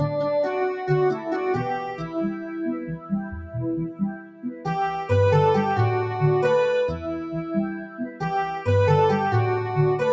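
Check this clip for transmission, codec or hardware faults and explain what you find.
A noise suppressor built for speech is acting on the audio, with distinct dropouts where it clamps down. The call's microphone path is working normally, with nothing above 8 kHz.

Noise suppressor applied to music or sounds, throughout: the suppressor mistakes steady, sustained content for noise and swings its gain by roughly 10 dB. Held sound pumps and thins while onsets survive. A waveform shows a breathing envelope, and a spectrogram shows sustained bands fading between sharp attacks.

Sound cut by the noise suppressor, from 1.95 to 3.55 s, 3.88 to 4.66 s, and 6.96 to 8.22 s: in each stretch the sustained sound sinks, by about 11, 13 and 12 dB at the deepest. The waveform shows a collapsed envelope, and the spectrogram shows dimmed regions and truncated decays.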